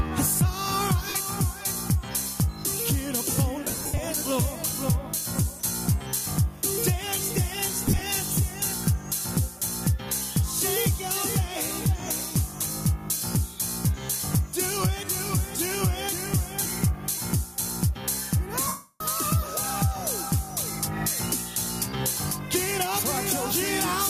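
Throughout, the gain swings by roughly 10 dB, ducking under each loud sound: gain pumping, likely from gain set far too high with a fast limiter clamping it.

At 1.09–1.15 s, 3.64–3.98 s (scattered, with the longest gap about 70 ms), 7.86–8.01 s (longest about 40 ms) and 18.67–19.01 s, tones smear into noise. These are lost LE Audio frames: the LC3 decoder repeats the last spectrum with random signs, and its gaps fit 7.5 ms frames. In the final 330 ms loss, the smear fades away into silence.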